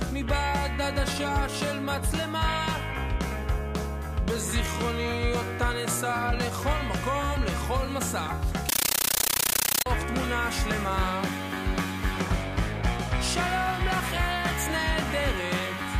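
From 8.69 to 9.86 s the sound turns into loud chattering static, a compressed stream played as audio: undecoded AC-3 bursts of 13.3 ms repeating at 31.25 Hz, which fits a 640 kbps stream.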